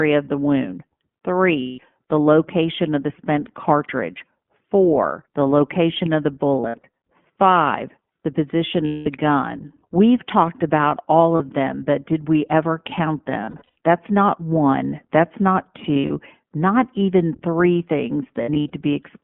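Speech runs through the iLBC codec for the whole clip. Nothing is heard above about 3.4 kHz or below 150 Hz. The voice is plainly rough and synthetic, which fits iLBC's 15.2 kbps mode with 20 ms frames. Lost iLBC frames cause seven dropouts, at 1.6 to 1.8 s before "the location of the", 6.6 to 6.86 s, 8.86 to 9.07 s, 11.36 to 11.41 s between "talked about all" and "them but did we", 13.44 to 13.74 s after "did we ever count", 15.94 to 16.11 s and 18.42 to 18.73 s. In each gap the decoder repeats the last pitch cycle with noise. That gives a held, buzzy vowel. Some losses are scattered bursts with runs near 70 to 100 ms. The voice recovers almost at once after each gap.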